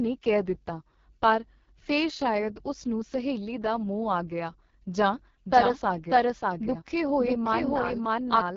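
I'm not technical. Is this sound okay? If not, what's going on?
No. The whole clip has gone through the AMR wideband (HD Voice) codec, the phone-call format, at one of its lowest quality settings. That is why the speech sounds rough and raspy throughout. Nothing above about 7.1 kHz comes through, so the top end is cut off.

From 5.46 s, right after "ਮੋਹ ਆ ਗਿਆ ਜਾਂ", you hear a doubled audio track until the end. A second copy plays about seven tenths of a second behind, at roughly the same loudness. It was likely captured twice, with one path running slower.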